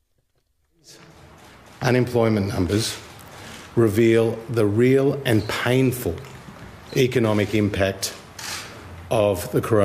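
No technical faults can be heard in this clip. Nothing in the audio calls for a fault explanation.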